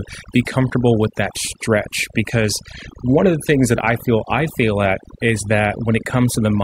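Overdone noise removal runs through the whole recording. The noise reduction was set too aggressively. Frequency bands near the noise estimate get cut hard, taking soft parts of the voice too. Pauses fall to near silence with twinkling specks.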